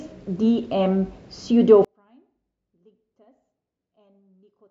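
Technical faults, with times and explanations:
1.85 to 4.71 s, one channel inverted: From 1.85 s to the end, the speech almost disappears when heard in mono, dropping by about 38 dB. What remains is a faint trace of the sound. The likely cause is one stereo channel flipped in polarity. The two channels then carry nearly the same signal with opposite sign. Summed together, they cancel. Only the small differences between them survive.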